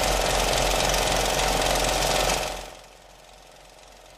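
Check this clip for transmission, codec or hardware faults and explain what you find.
One fault is present. Zipper noise, 2.32 to 2.88 s: a fall of roughly 25 dB is applied in unsmoothed 2 dB jumps, around twenty per second. Each jump leaves a tiny click, so a quick ticking rides on the sound as it drops.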